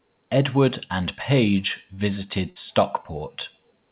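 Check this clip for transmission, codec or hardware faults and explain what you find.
Two transmission faults are audible, both from lost packets. The speech is band-limited with nothing above 4 kHz, which fits a narrowband call codec such as G.711.

A short concealed packet loss occurs from 1.94 to 2.00 s. About 40 ms of audio never arrived. The receiver filled it by extending the preceding sound, then blended back in. It is heard as a brief smear or wobble.

A burst of packet loss follows from 2.50 to 2.58 s. About 60 ms of consecutive audio was lost. The receiver continued the last sound for 56 ms while fading it down. A held buzz or fading hiss results, and the speech resumes with that stretch missing.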